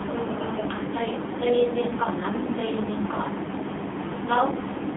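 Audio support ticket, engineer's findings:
AMR narrowband mobile codec across the whole speech clip. Band squeezed to roughly 200 Hz to 3.6 kHz, nothing up top, so it sounds like a phone call. Heavy buzzy, synthetic edge from the vocal-tract model rebuilding each 20 ms frame from a handful of pulses. Damage level fits a low AMR-NB mode, somewhere around 6 kbps. Probable component: a mobile or telephony leg in the chain.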